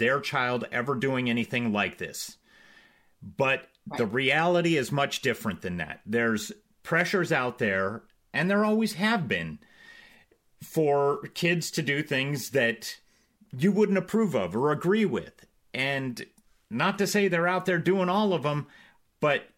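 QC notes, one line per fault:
8.39 s, dropped samples: A single sharp click sits between "pressures out there" and "there always have been". A couple of samples are likely missing from the stream here, a tiny fraction of a millisecond. The waveform jumps straight from one value to a later one. No speech is lost, because the gap is far too short. The sudden step is what makes the click. It shows as a thin vertical line across the spectrum.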